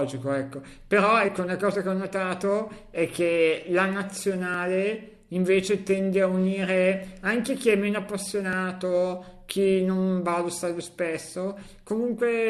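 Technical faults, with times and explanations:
4.54 s and 8.53 s, overlap between stream segments: Two short stretches of the speech go missing, the first about 17 milliseconds long and the second about 8 milliseconds. The time stamps of neighbouring segments overlapped, so the player discarded the doubled span, but that span held real audio. The waveform jumps straight across the gap. That step is heard as a small click or skip. The events fall about 4 s apart, which matches a 4-second segment length.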